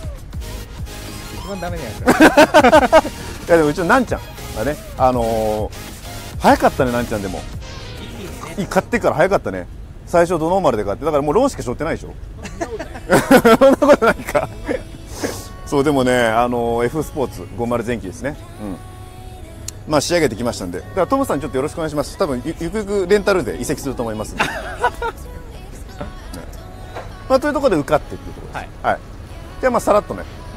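No technical faults are audible anywhere in the audio.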